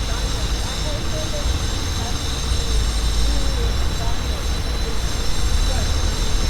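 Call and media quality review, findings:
No faults found in this recording of sounds. Nothing in the audio calls for a ticket entry or further review.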